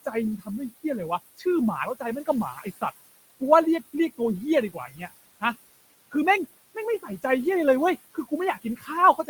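A speech recording whose background sinks between phrases and swells back under them. These are noise suppressor artifacts: the processor pulls bands it judges to be steady noise down by about 18 dB frame by frame, so the room noise, sitting about 17 dB below the speech, pumps with the talking. Speech cut by the noise suppressor makes soft sounds and word endings fade or vanish at 0.05–0.48, 1.37–1.46, 1.95–2.83, 4.73–5.02 and 6.75–7.24 s, and from 8.14 s to the end. The suppressor mistook these quiet parts for background and turned them down by about 12 to 18 dB.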